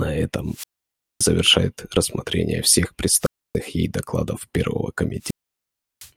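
Wireless microphone squelch dropouts occur at 0.46–1.33 s, 3.20–3.57 s and 5.19–6.11 s. Each time, the radio signal weakens and the receiver's squelch mutes the output. The result is a burst of hiss, then near silence for about 0.57 s, 0.29 s and 0.71 s, before the speech returns.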